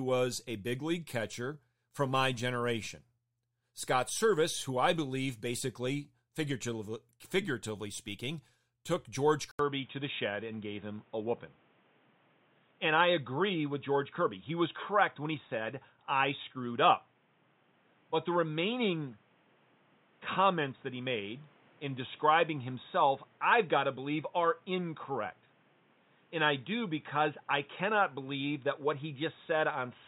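Input switched to a poorer device, at 9.51 s and lasting to the end: after a gap of about 80 ms, the speech turns dull and boxy, with nothing above 3.8 kHz and a new background noise roughly 35 dB under the speech, while loudness stays much the same. The likely cause is the recording chain swapping to a different microphone or a headset's call profile, whose narrower band and own noise floor replace the original input.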